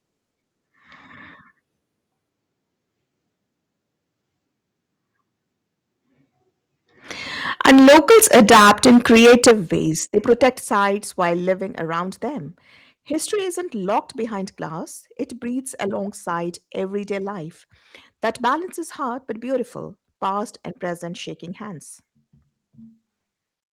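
From 7.6 to 9.52 s the speech is harshly distorted. This is microphone overload, likely from an input set so high that peaks ran about 15 dB past the converter's ceiling and nearly a third of the waveform was flattened. It sounds gritty and crackling on the loudest syllables. At 7.66 s the level drops about 2 dB, and at 9.51 s it drops about 10 dB. Both are the microphone volume being stepped down, likely by call software reacting to the clipping. Unlike the overload, each step adds no distortion. Voice and background fall together, instantly, to a new steady level. A milder overload follows from 10.17 to 10.47 s, just before "sites while". It runs about 3 dB over, so only a small fraction of peaks are cut and the crackle is brief. At 10.53 s, also just before "sites while", a third step of about 5 dB lowers everything cleanly, with no edge on the sound.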